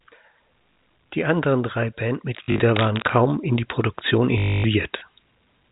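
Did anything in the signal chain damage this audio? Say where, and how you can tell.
Yes. Packet loss with last packet repeated, a network fault, appears at 0.74–0.76 s, 2.44–2.6 s after "anderen drei", and 4.38–4.64 s. Replayed 20 ms chunks buzz at 50 Hz.

Cable scratch noise at 2.76–3.1 s, just before "in die", is a burst of ragged rustle nearly as loud as the speech, likely from a worn connector in the analogue wiring.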